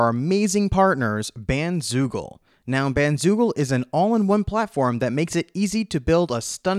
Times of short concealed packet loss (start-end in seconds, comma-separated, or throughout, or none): none